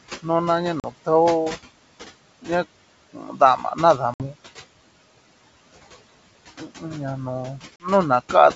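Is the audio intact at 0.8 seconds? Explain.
No. From 0.80 to 0.86 s there is packet loss on an ADPCM call. About 40 ms of audio, probably around two packets, is missing and filled with silence. The hole has hard edges. The receiving decoder rebuilds each sample from a prediction and an adaptive step size. During the gap those drifted away from the sender's. When speech returns, it comes back slightly distorted until the decoder catches up.

Noise suppressor artifacts are also present at this moment, as they are throughout the clip. The suppressor pulls down any band it judges to be steady background, by about 17 dB, and it decides this frame by frame. The room noise is therefore pushed down between syllables and rises again under them.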